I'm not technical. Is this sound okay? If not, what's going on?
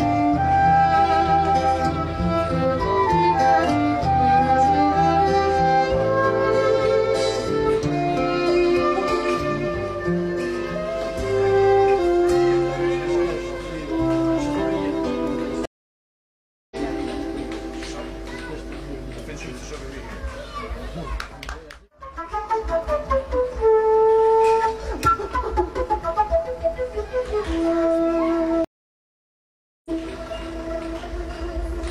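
No. There's a stream reconnect at 15.65 s and again at 28.64 s. Each time the connection dropped, the player went silent for about a second, then reconnected and resumed roughly a second further on, so a bit of the audio is skipped.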